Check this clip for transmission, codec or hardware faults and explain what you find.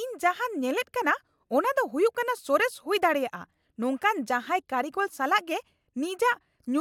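Nothing stands out here; the speech comes across steady and intact, with no transmission, codec or hardware trouble to point to.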